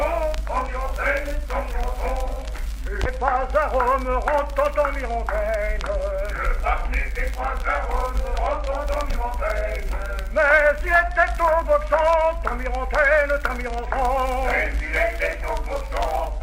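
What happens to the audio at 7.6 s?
Nothing goes wrong at 7.6 s; the audio plays through that moment intact, with no dropout, click or other fault.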